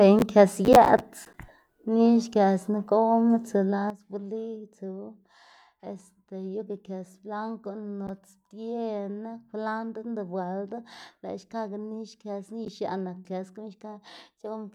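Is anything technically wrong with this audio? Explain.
Yes. At 3.9 s there is a sudden gain jump. The speech and background noise drop together by about 12 dB, likely from a gain change applied without a ramp.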